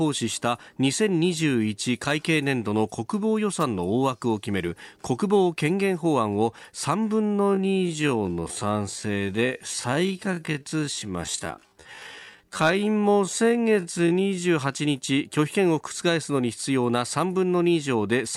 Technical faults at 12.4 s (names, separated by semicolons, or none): time-stretched section